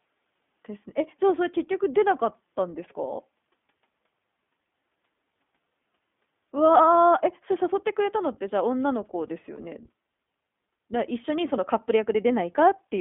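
The whole recording has passed through the iLBC codec, a narrowband VoIP coder that rebuilds each short frame of excitation on its own, here in blocks that point to 20 ms frames and a rate that fits its 15.2 kbps mode. The line passes only about 200 Hz to 3.5 kHz, so the speech lacks low body and all upper brightness, and the coding damage is plainly audible as a rough, slightly synthetic grain over every syllable.

From 9.56 to 9.60 s there are lost iLBC frames: packets failed to arrive, and the decoder filled the 20 ms hole by repeating its last pitch cycle blended with noise. The gap matches a single lost 20 ms frame. It comes across as a brief held, faintly buzzy vowel where the speech should continue. Because each iLBC frame decodes independently, normal sound returns immediately after.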